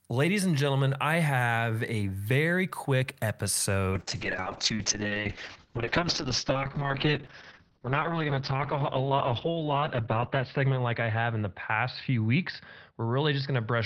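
From 3.92 s to the end of the clip, a call bitrate drop pushes the encoder from 40 kbps to 6 kbps, staying at that floor for 5.6 s. Speech turns coarse and watery. A spectrogram shows the top band cut from 20 kHz to 6 kHz.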